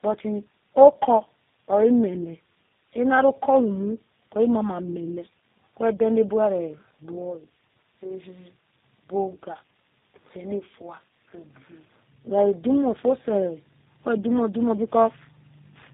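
Speech throughout, affected by tandem speech coding: the sound suggests a GSM full-rate leg handed through G.711 into G.729A at 8 kbit/s, so two low-rate speech codecs act in series, the second re-encoding the first's artefacts. The result is rough, warbly and muffled, with nothing above 3.7 kHz.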